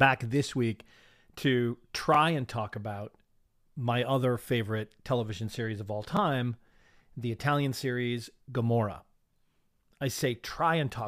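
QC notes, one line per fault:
2.14–2.17 s, 6.17–6.19 s, 10.19–10.21 s: overlapping chunks. Each 4.0 s chunk starts about 23 ms early, replaying that slice at every join, heard as a regular stutter.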